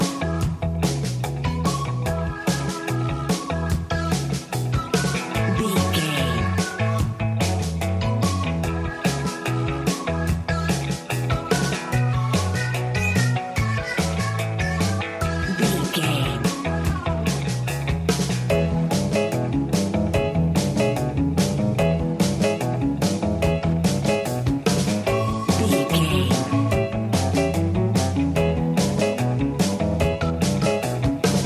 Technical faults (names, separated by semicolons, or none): none